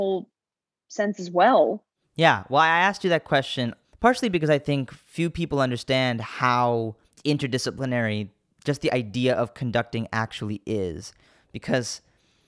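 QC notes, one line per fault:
No technical faults were found in this speech clip; the signal is continuous and stable throughout.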